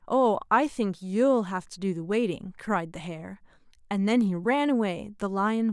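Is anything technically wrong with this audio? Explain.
No, nothing is technically wrong with this audio.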